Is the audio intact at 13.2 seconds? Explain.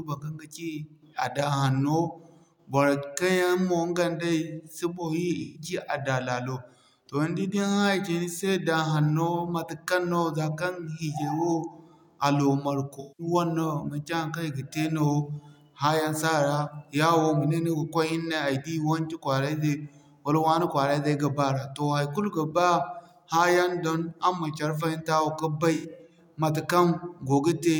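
No, AAC frame loss with concealment runs from 13.00 to 13.27 s. About 192 ms of coded audio went missing, which fits roughly nine lost frames, and the decoder rebuilt it from the last good spectrum, leaving a brief smeared, noisy, phasey patch in the speech.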